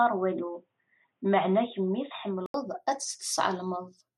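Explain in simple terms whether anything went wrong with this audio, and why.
Something did go wrong at the start. From 0 to 2.54 seconds the speech sounds dull and boxy, with nothing above 3.8 kHz. At 2.54 seconds there is a short gap of about 80 ms, and then the sound opens up and clears. The loudness stays the same, and any added hiss is very faint. This points to an input switched to a poorer device. The recording likely began on a weaker microphone or headset and then moved to a better one.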